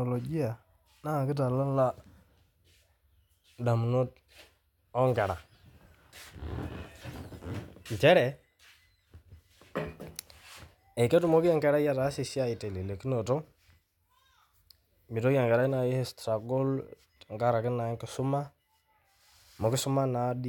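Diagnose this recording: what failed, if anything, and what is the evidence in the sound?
Nothing failed in this recording, and the sound gives no evidence of any fault.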